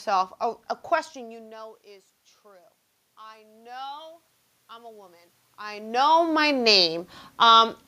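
At 3.18 s, just after "you know is true", automatic gain rising begins. The level reaching the microphone fell by about 24 dB. The gain control judged the input too quiet and raised its gain slowly, by about 6 dB. The swell lasts until 6.42 s. Voice and room noise grow louder together. That shared rise marks it as gain, not movement. The talker's shifts near 1 s and 5.5 s are natural.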